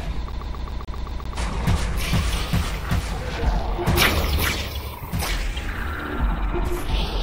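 From 0.32 to 1.37 s the CD is stuck on one turn: the laser jumps back each revolution, replaying a 131 ms loop eight times with brief mutes, a fast even stutter.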